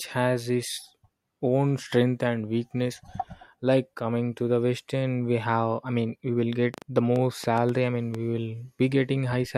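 A speech clip with a train of clicks from 6.74 to 8.16 s, right after "mean we will get". There are about seven sharp pops at an uneven pace, about five per second, peaking around 10 dB above the speech. The likely cause is interference or a faulty connection or power supply. They appear as thin vertical broadband lines on a spectrogram and as isolated spikes on the waveform.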